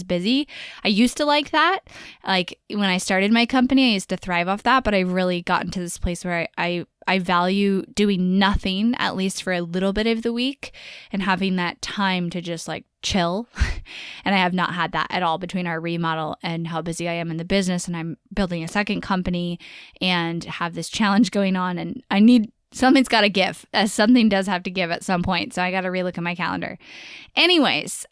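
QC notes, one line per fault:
No faults heard anywhere in the speech.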